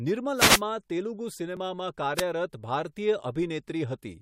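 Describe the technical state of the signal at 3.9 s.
At 3.9 s the speech signal is intact, with no dropout, clipping, glitch or other technical fault.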